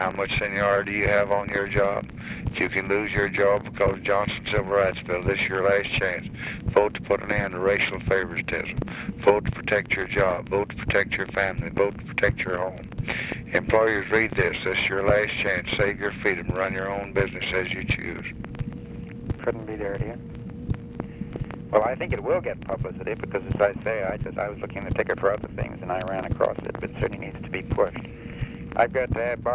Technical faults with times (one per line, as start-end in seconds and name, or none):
none